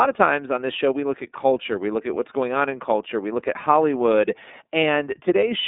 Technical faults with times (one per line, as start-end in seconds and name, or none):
0.00-5.68 iLBC codec